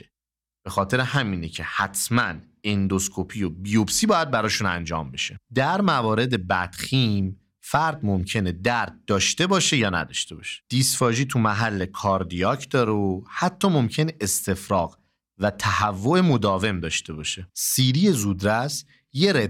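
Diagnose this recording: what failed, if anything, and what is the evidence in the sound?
Nothing failed; no fault can be heard anywhere here.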